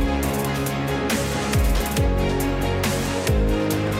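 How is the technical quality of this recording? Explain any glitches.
There's one recurring glitch: clock drift buffer slips. From 0.42 s to 3.87 s you get a click roughly every 0.69 s, about seven in all. It's likely two devices on separate clocks, drifting apart by a few hundred ppm. Each slip drops or repeats around fifteen samples, which makes the tick.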